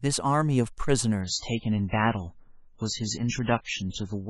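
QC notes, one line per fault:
1.21–4.30 s, adaptive stream at a lower bitrate: the speech abruptly turns dull and swirly, with nothing above 7.7 kHz and stronger codec artefacts, with no gap. The player switched to a much leaner stream, which fits moving from 128 kbit/s MP3 to 16 kbit/s.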